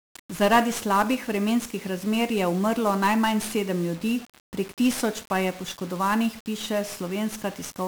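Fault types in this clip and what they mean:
1-bit DFPWM compression: present throughout the speech. Each sample is reduced to a single bit that nudges an adaptive level up or down, so heavy broadband quantisation noise coats everything. The result is fuzzy and crackling, with the treble sunk under hiss, which fits a 48 kbps stream.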